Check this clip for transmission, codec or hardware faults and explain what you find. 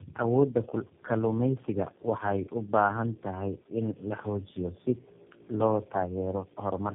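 One fault runs throughout: tandem speech coding. The speech was likely re-encoded by three low-rate codecs in series, consistent with AMR-NB then G.729A twice, each compounding earlier errors. It sounds rough, muffled and warbly; a spectrogram shows nothing above 3.6 kHz and smeared formants.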